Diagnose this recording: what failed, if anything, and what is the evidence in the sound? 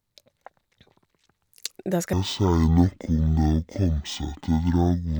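A stereo read as mono fault in sample-format conversion begins at 2.13 s and runs to the end. The speech drops to half speed and an octave lower, because interleaved left and right samples are being played one after another as a single channel. On a spectrogram, the harmonics compress downward and a fainter mirrored copy fills the upper half.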